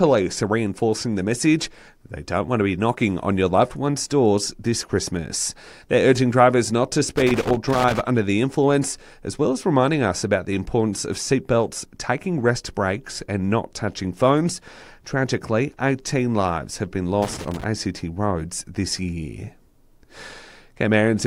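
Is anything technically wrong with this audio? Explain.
Yes. The speech has loose connector crackle in two places. The first runs from 7.16 to 8.00 s, lasting about 0.84 s. The second runs from 17.22 to 17.64 s, about 0.42 s. A worn or dirty contact is briefly losing and regaining connection as something shifts. This chops the signal on and off irregularly, and any DC on the line turns each break into a pop. The result is a ragged burst of scratching crackle.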